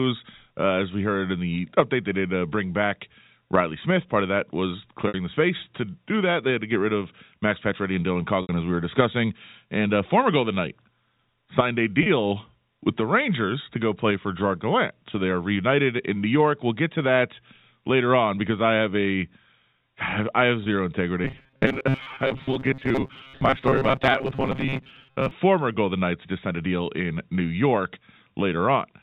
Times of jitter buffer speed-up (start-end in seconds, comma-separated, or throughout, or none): none